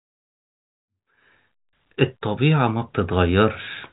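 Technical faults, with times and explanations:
No technical faults are audible.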